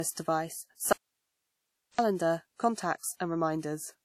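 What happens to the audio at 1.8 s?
At 1.8 s the sound is inside an audio dropout to a faint residue lasting from 0.93 to 1.99 s: the signal abruptly vanishes, leaving only hiss roughly 55 dB down. The likely cause is a path that stayed live after losing its input. On a waveform it shows as a near-flat stretch with sharp edges.

Throughout, the audio is low-bitrate audio saved at a high bitrate, likely a 48 kbit/s WMA re-encoded as 320 kbit/s MP3. A spectrogram shows nothing above 15.4 kHz.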